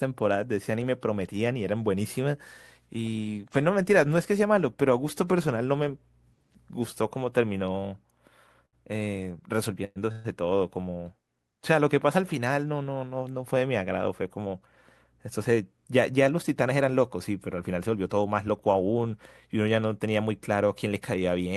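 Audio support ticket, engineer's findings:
Short stall from a late packet, 8.65–8.75 s: speech sound held about 74 ms with slight buzz or dip, then resumes where it stopped, nothing lost. Jitter buffer ran empty briefly. Unlike the freezes below, no fade and no silence.

Call audio freeze, 9.85–9.98 s and 10.12–10.26 s: last sound carried on as a fading buzz or hiss for 110 ms and 126 ms, the first ending in about 30 ms of silence. Likely packets held in transit, so the jitter buffer emptied. Longer and decaying, unlike the stall.

Jitter buffer speed-up, 15.38–15.88 s (109%, about 50 ms removed) and 21.16–21.48 s (111%, about 40 ms removed): speech hurried at unchanged pitch. Buffer trimmed pitch-period pieces to shed excess delay. Pitch stays put, so it is not a resampling error.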